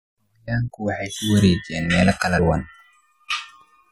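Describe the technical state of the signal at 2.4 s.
At 2.38 s, just after "meelo kala", compressed frames are skipped: about four 23.2 ms frames never reach playback, so the speech jumps ahead roughly a tenth of a second. Overlapping neighbour frames smear the join into a brief blip, unlike a dropout's silence or a hard click.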